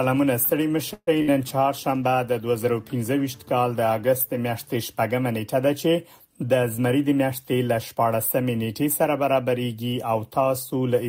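Three network playback faults affect this audio. From 0.93 to 1.09 s there is a call audio freeze: the last sound smears into a fading buzz or hiss, then about 50 ms of silence, shown on a spectrogram as stretched, blurred bands dropping to blank. The likely cause is delayed packets draining the jitter buffer, which pushes everything after it about 138 ms later. At 1.22 to 1.30 s a burst of packet loss leaves a roughly 60 ms fill that decays in level, and the waveform then jumps ahead with that stretch missing. Between 6.34 and 7.96 s a jitter buffer speed-up plays the audio at 108% with pitch unchanged, trimming about 150 ms through many tiny cuts, visible as compressed spacing of events on the timeline.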